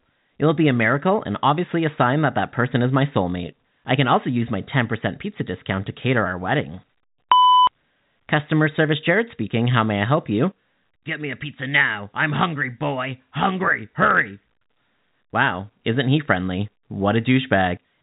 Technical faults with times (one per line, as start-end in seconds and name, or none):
none